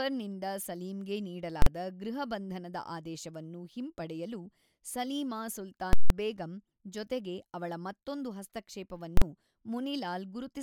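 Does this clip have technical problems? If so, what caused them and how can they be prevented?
Yes. Invalid numbers at full scale occur at 1.62–1.66 s, 5.93–6.10 s and 9.17–9.22 s. Infinite or invalid values pinned whole processing blocks to maximum output, giving single bangs in the 43 ms bursts and a loud pop, silence, then another pop across the 170 ms one. This can be prevented by checking each block for non-finite values and clearing or muting them before output.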